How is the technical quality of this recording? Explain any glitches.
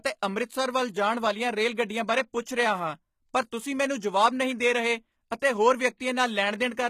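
The technical quality is compromised by plainly audible codec damage across the whole recording and a brief smeared attack near the end.

Throughout, the treble sounds synthetic. S sounds come across gritty and lispy, and nothing is present above 14.9 kHz. This is likely HE-AAC compression at a low bitrate, consistent with about 20 kbps. The codec codes only the lower spectrum and rebuilds the highs by copying lower bands upward, so the upper harmonics fail to line up with the real ones.

From 5.97 to 6.00 s, a short hiss runs for about 31 ms ahead of a sharp attack, and the onset itself sounds softened and blurred. This is pre-echo. The transform codec spread the quantisation noise meant for the loud onset across its whole block, so the noise also fills the quiet moment just before it.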